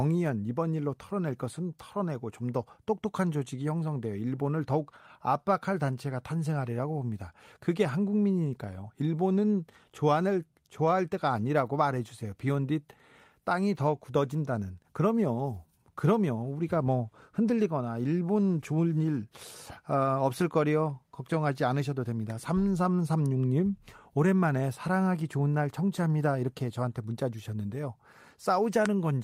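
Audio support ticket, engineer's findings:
No faults found on listening; no action needed.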